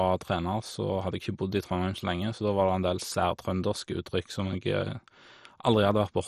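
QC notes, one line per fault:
Throughout: MP2 compression. The speech sounds dull and muffled, with a gurgling, grainy roughness wrapped around it and upper detail that seems to flicker in and out. Nothing survives above about 13.7 kHz. The likely cause is MPEG Layer II coding at a low rate, around 56 kbps, where the encoder runs short of bits. It switches off whole upper sub-bands and quantises the remaining ones so coarsely that heavy granular distortion results.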